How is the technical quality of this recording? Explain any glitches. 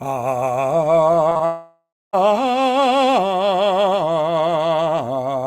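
The recording has two related network faults clustered between 1.29 and 2.15 s.

Short concealed packet loss strikes three times in a row, at 1.29, 1.33 and 1.37 s, each losing about 20 ms. The receiver patched each gap by extending the preceding music, so they come across as a quick smear or flutter rather than clean cuts. A spectrogram shows brief stretches where harmonics turn blurred and overly regular, with small seams where real audio resumes.

A long network dropout follows from 1.45 to 2.15 s, with roughly 0.68 s of music missing, likely from packets failing to arrive for that whole stretch. The last sound is drawn out as a fading buzzy tail, and the final quarter second or so is silent before the music returns further along. The waveform shows a decaying envelope, then a flat gap, and the spectrogram shows smeared, thinning bands ending in a blank column.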